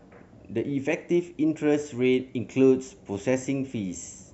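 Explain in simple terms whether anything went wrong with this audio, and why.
Nothing went wrong here.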